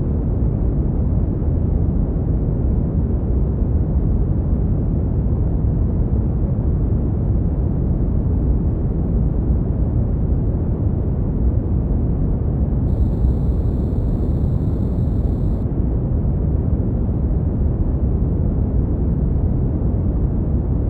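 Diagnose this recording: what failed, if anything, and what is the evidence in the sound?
From 12.88 to 15.63 s a crude rate conversion adds a faint, gritty, inharmonic fizz well below the main sound, tracking loud and high content. Nearest-sample dropping without filtering fits a 48 kHz to 44.1 kHz step. Unlike codec artefacts, the spurious tones follow a fixed periodic pattern.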